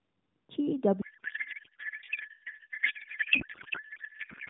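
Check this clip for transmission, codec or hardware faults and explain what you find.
One fault is present. A codec payload misread runs from 1.02 s to the end at 4.50 s. The AMR narrowband speech before it is band-limited below 4 kHz and only lightly coloured, consistent with the 12.2 kbps mode. At the onset, the decoder begins pulling its parameters from the wrong bit positions, which fits octet-aligned AMR being unpacked as bandwidth-efficient. From then on, the speech gives way to garbled noise and warble that barely tracks it.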